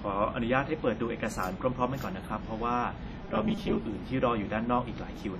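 From start to finish the speech carries heavy transform-codec damage, most likely WMA compression at a low rate, which fits about 32 kbps. The encoder's long blocks smear quantisation noise over tens of milliseconds, so consonants ring and a washy hiss swells and fades with the level. Nothing survives above 13.8 kHz. Unlike a plain low-pass filter, the damage is not just lost top end: weak detail vanishes unevenly and the grit breathes with the signal.

From 3.21 to 3.83 s the speech turns into a rigid, metallic buzz at 200 Hz, robotic sound from repeated short buffers. The likely cause is audio arriving too seldom, so playback loops the last few milliseconds. A 200 Hz buzz fits a loop about 5 ms long. About half the sound in that stretch is repeated material, and the real audio it replaces is skipped. Unlike codec ringing, the buzz holds a fixed rate while the speech rhythm still roughly shows through.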